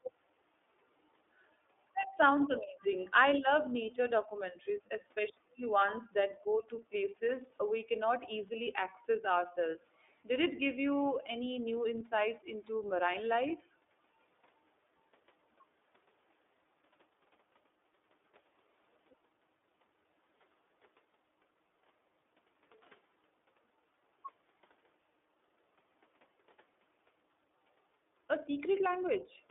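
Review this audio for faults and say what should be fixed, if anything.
iLBC codec damage runs throughout: each 30 ms frame is coded independently, leaving audible roughness, with the band limited to 300 Hz to 3.6 kHz, which fits the 13.33 kbps mode. Prevent it by sending a wideband codec such as Opus instead of iLBC.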